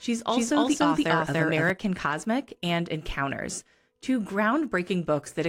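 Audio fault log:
0.0–1.7 s, doubled audio track: an equally loud full-band copy trails about 0.3 s behind, likely from a slower second path; waveform onsets repeat, stopping abruptly.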